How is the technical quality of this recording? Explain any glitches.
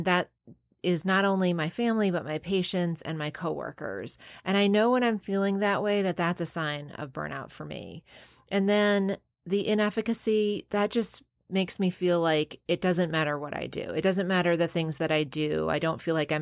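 The technical quality of this recording is sound, with no glitches to explain.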